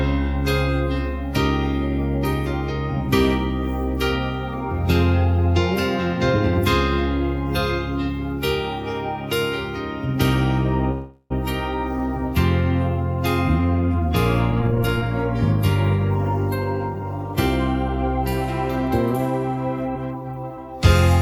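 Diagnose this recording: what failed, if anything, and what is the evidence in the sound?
At 10.91 to 11.32 s there is a call audio freeze at the network and jitter-buffer stage. For about 0.39 s the last sound is carried on artificially and fades, ending in roughly 40 ms of silence. The audio then resumes exactly where it stopped, with nothing skipped. That distinguishes it from a packet-loss dropout, where material vanishes. The likely cause is packets held up in transit, letting the jitter buffer run dry, which adds about 388 ms of delay.

The jitter buffer speed-up follows, still in the buffer stage. From 14.51 to 15.06 s the audio runs at 150% speed, and from 19.49 to 20.58 s at 107%. Both stretches sound hurried, yet the pitch holds steady. That separates this from a resampling or clock-rate error, which would shift pitch along with speed. The receiver trims short pitch-period pieces repeatedly to shed surplus buffered audio, roughly 0.3 s in the first stretch and 0.1 s in the second.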